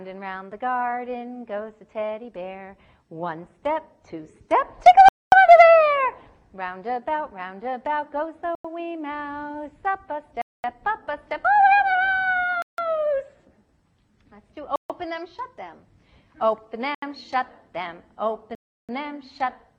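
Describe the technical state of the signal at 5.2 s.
At 5.2 s the signal is in a dropout: the audio cuts to silence at 5.09 s and returns at 5.32 s, a gap of about 235 ms. This is a Bluetooth stall. The likely cause is radio interference delaying packets on the wireless link, so the receiving buffer emptied and playback halted until retransmitted data arrived. The break is a clean, abrupt mute rather than a fade, with sound resuming sharply at its end.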